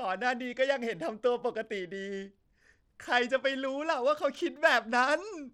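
A speech recording with plainly audible Bluetooth SBC compression damage running through its whole length. The upper frequencies thin out and flicker in and out rather than holding steady, and a gritty, grainy noise with some aliasing sits on top of the speech. This is likely SBC coding at a small bit pool, consistent with a rate of around 96 kbps, where the top sub-bands receive few or no bits and the remaining bands are coarsely quantised.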